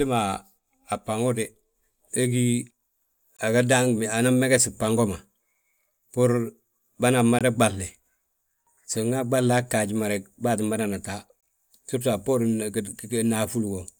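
Speech with a gap between chunks, heard three times. Short holes of 20 ms start at 3.37, 7.39 and 11.41 s. They recur every 4.0 s, so the audio was split into 4-second chunks, with silence inserted at each join.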